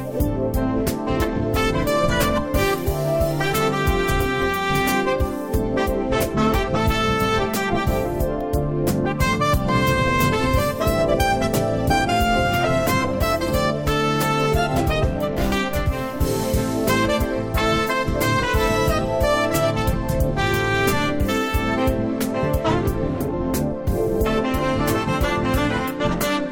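No technical faults can be heard anywhere in this clip.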